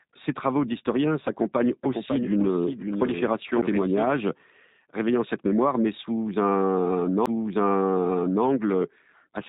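G.729 codec damage runs throughout. The low-rate speech coder rebuilds the voice from a filter and a few pulses, so it sounds rough and synthetic, with nothing above 3.8 kHz.

A doubled audio track appears from 1.83 to 4.07 s. A second copy, a few decibels quieter and roughly half a second late, starts and stops abruptly, likely picked up again through a slower path.

CD skips occur at 3.62 and 7.26 s. Each is a brief tick, a few milliseconds of silence where the laser jumped tracks, followed by a sudden jump in the audio.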